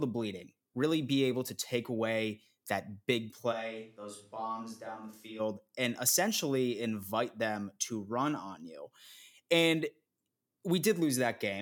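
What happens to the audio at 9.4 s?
At 9.4 s the speech runs on cleanly, with no dropout, click, distortion or other fault at that moment.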